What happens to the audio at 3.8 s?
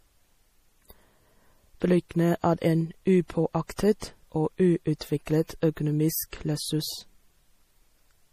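A transform codec spread its quantisation noise across a whole block containing a sharp attack, causing pre-echo from 3.76 to 3.79 s. For about 24 ms, noise sized for the loud onset fills the quiet just before it, so a brief hiss precedes the attack and the onset sounds softened and smeared.

This happens within likely MP3 compression running through the speech, with damage consistent with a bitrate around 40 kbps. The encoder removes everything above 15.3 kHz and drops weak frequency lines frame by frame, giving a plainly audible watery, swirly texture.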